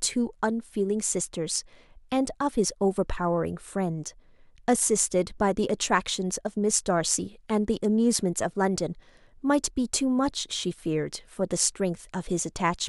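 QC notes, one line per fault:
No faults were found in the speech recording. Nothing heard in the audio called for a QC entry.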